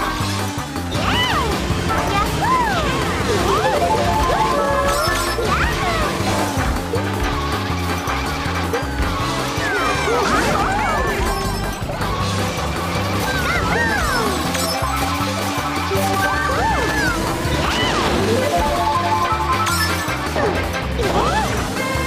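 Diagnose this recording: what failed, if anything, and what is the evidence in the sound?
Nothing in the signal points to a failure at any stage of the chain, from the analogue input through conversion, buffering and playback.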